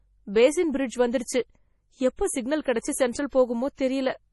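Throughout the speech, the sound is watery and swirly, s sounds chirp metallically, and nothing remains above 11.5 kHz. This heavy damage is likely MP3 compression at a low bitrate near 32 kbps. Unlike a plain low-pass filter, weak frequency lines flicker between frames.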